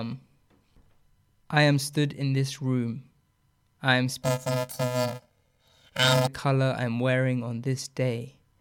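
Planar audio read as interleaved affects this speech from 4.22 to 6.28 s: stereo blocks of 128 samples, about 2.67 ms each, are read as alternating left-right pairs, so each block replays twice at double speed, producing a robotic buzz at 375 Hz rather than a clear octave jump.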